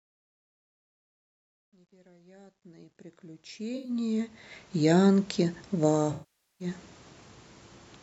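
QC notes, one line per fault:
0.0–4.82 s, truncation distortion on a fade: the fade-in rises cleanly in level, but its quiet early stretch is grainy, worst from 0.0 to 2.83 s, where low-level detail turns gritty. The gain stage rounds each sample to a coarse step without dither, which fits about 11 bits, so small waveforms become a few square steps. Unlike steady hiss, the grit follows the signal and vanishes in the pauses.
3.76–3.90 s and 6.13–6.67 s, AAC frame loss with concealment: at 3.76 s a gap of about 85 ms, which fits about four frames, becomes a short smeared, phasey patch. At 6.13 s a gap of about 0.47 s, which fits about 22 frames, sags toward silence and then fades back in. In both, the decoder rebuilds the missing audio from the last good spectrum. A plain dropout would cut hard to silence, but here the gap is filled with a noisy imitation that decays over the longer gap.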